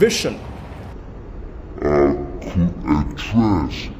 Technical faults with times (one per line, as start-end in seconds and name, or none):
0.93-4.00 stereo read as mono